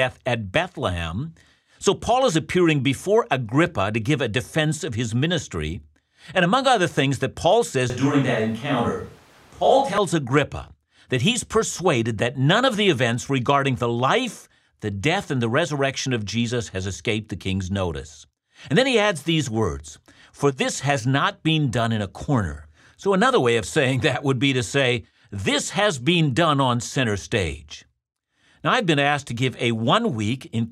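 From 7.9 to 9.98 s the speech turns suddenly roomy and hollow, with thinner bass and a faint background noise floor well below the speech, though the level holds steady. This is likely a switch to a distant microphone, with the close microphone's signal dropping out, before the close sound returns abruptly.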